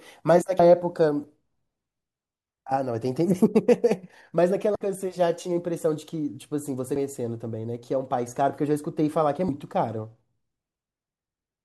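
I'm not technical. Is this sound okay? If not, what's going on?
No. This speech has damaged data in a compressed stream: a few small pieces of the saved or transmitted audio file got corrupted. When the player reaches a broken spot, it can't read that bit properly and has to hunt for the next clean piece of audio. You hear this as a brief chirp or blip breaking into the speech, from 4.72 to 4.76 seconds, at 6.96 seconds, and from 9.46 to 9.49 seconds.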